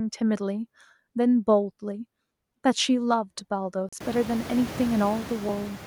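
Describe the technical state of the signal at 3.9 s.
A Bluetooth dropout sits at this moment, from 3.89 to 3.93 s. The output goes completely silent for about 37 ms, a hole with abrupt or briefly faded edges. When the sound comes back it has moved on, as if it had kept playing through the gap. The likely cause is audio packets arriving too late at the headphones and being discarded, which fits two lost packets. This is a true gap of silence, not a short click, and that is what separates it from the slips described below.

Clock drift buffer slips run across the same stretch of the clip, from 1.09 to 5.49 s, but 3.9 s falls between two of them. Each slip is a brief click or pop that comes back at a steady 1.47 s interval, giving four in total. The likely cause is two devices running on slightly different clocks, an error of roughly 700 ppm, so a block of about 50 samples is dropped or repeated each time. 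Unlike the dropout, a slip is a regular tick and does not leave a silent hole.

Noise suppressor artifacts are present here as they are throughout the clip. Bands the suppressor treats as steady noise are pulled down by about 15 dB frame by frame. As a result, the background sinks between words and swells back under them. Even at its lowest, a residue of noise remains rather than true silence, and that distinguishes this pumping from the dead gap of the dropout. The room noise rises by about 25 dB at around 4 s, just after the gap, and stays about 17 dB below the speech.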